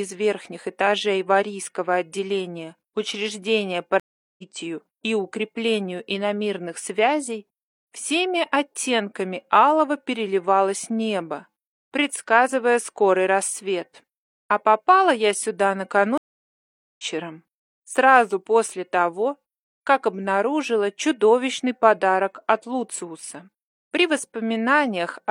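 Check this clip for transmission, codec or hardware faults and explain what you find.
Two stream reconnect faults. At 4.00–4.43 s and 16.18–17.04 s the audio goes silent for 0.38 s and 0.81 s, then resumes about 0.4 s and 0.5 s further on, because the connection dropped and a fresh decoder picked up the live stream.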